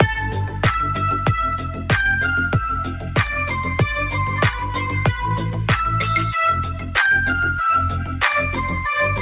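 A speech-tuned noise suppressor stays active through the whole clip, treating sustained sound as noise, so levels pump by around 10 dB and held portions thin out while attacks survive. The suppressor then cuts specific stretches harder: 1.66 to 1.89 s and 2.91 to 3.16 s, each dipping about 6 dB; 6.71 to 6.95 s, again about 6 dB; and 8.04 to 8.21 s, about 5 dB. These sound like brief sags or truncated decays. Through all of this, the call path passes nothing above 4 kHz, which fits G.711 A-law.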